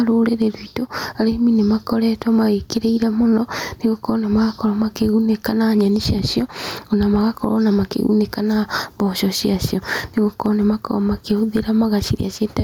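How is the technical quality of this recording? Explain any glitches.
The recording has one problem, and it runs the whole way through: gain pumping. The input gain was likely set far too high, so a fast limiter clamps down on every loud syllable, with the gain swinging by roughly 10 dB.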